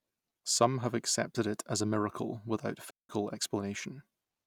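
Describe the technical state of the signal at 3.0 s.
Digital wireless dropout from 2.90 to 3.09 s, just after "as a miracle without": the receiver lost too much data and muted for 190 ms, leaving a clean silent gap with no noise burst.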